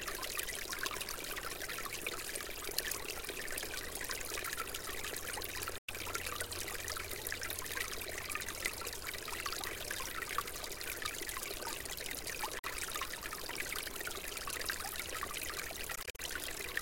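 Bluetooth dropouts at 5.78 s (102 ms), 12.59 s (44 ms) and 15.95–16.2 s (116 ms lost in scattered gaps over 232 ms, the longest 44 ms). These were likely caused by wireless packets arriving too late, so the sound cuts out and then resumes further along, as if it had kept playing.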